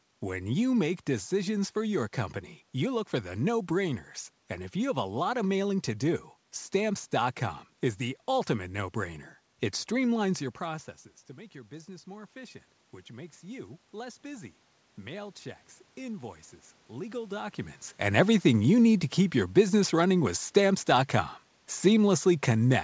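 From 12.04 s to 17.6 s there is automatic gain rising. Just before it, around 10.5 s, the talker moves away and the input drops by about 17 dB. The gain control hears the quieter level and pushes its gain up slowly, by about 8 dB over several seconds. The voice and the room noise swell together. The voice never fully recovers its earlier level, because the correction is smaller than the drop.

At 18.04 s the opposite happens: automatic gain falling, lasting to the end of the clip. Around 17.5 s the talker moves again. The gain control finds the input too loud, or its background noise too strong, and pulls its gain down gradually. Voice and background sink together over the remaining seconds. The band-limited sound, with nothing above 8 kHz, fits a G.722 call path.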